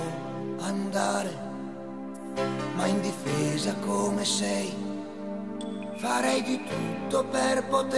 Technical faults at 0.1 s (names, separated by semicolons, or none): none